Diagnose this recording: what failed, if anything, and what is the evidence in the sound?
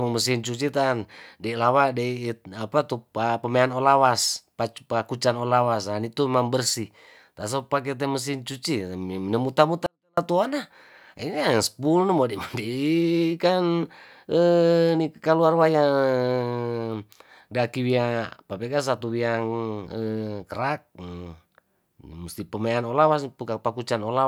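A sample-format conversion stage failed: a 24-bit alignment error (too quiet) between 9.86 and 10.17 s. The speech stays clean but falls about 48 dB at once, nearly inaudible. Twenty-four-bit samples sitting in the low bytes were read as 32-bit values. The waveform collapses to a flat sliver; the spectrogram fades uniformly.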